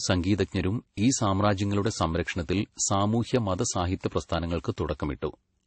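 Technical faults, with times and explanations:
Throughout, transcoding between lossy codecs. The speech has nothing above 8.3 kHz, so it sounds dull. Several kinds of coding damage sit on top of each other. This is likely a chain of low-rate lossy stages, perhaps an MP3-style encode followed by further passes ending in AAC. Each stage wasted bits on the earlier damage and added its own. The lowest cut-off stayed.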